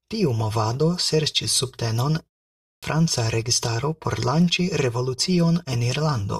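At 2.54 s, just after "movado serĉis subtenon" and a pause of about 0.33 s, there is a clipped start after a pause. The output path dozed off in the brief silence and took about 286 ms to wake, so the opening of the next stretch of speech is swallowed until 2.83 s and the word bursts in already underway. On a waveform the gap runs flat before a sudden edge, and a spectrogram shows energy appearing abruptly with no onset build-up.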